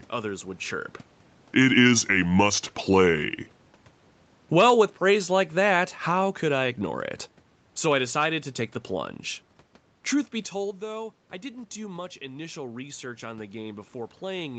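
At 4.43 s the automatic gain falling begins. The gain control judged the input too loud, or its background noise too strong, and started pulling its gain down. The change is gradual and runs until about 6.85 s. By then the level sits roughly 5 dB lower. The speech and the room noise behind it sink together. That shared drop gives it away. A talker simply getting quieter would leave the background where it was.

From 11.41 s to the end, the automatic gain rising takes over. Shortly before, around 10 s, the talker moves and the input falls by about 12 dB. The gain control reads this as too quiet and slowly raises its gain. The speech swells back over more than a second. The room noise swells up with it. Through all of this, the call path keeps nothing above 8 kHz.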